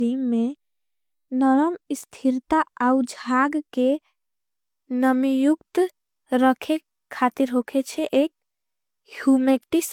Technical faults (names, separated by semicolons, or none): low-bitrate audio saved at a high bitrate